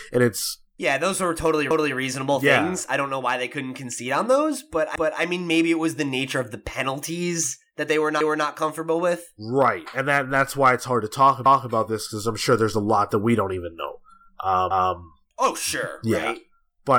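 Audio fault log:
1.71–1.96 s, 4.96–5.21 s, 8.21–8.46 s, 11.46–11.71 s, 14.71–14.96 s: overlapping chunks. At each join the speech replays a 250 ms stretch, a stutter recurring every 3.25 s. This fits 3.0 s processing chunks, each starting a quarter-second before the previous one ended. Unlike a dropout or underrun, nothing goes missing: the same material is heard twice. The strict, even spacing also sets it apart from random network glitches.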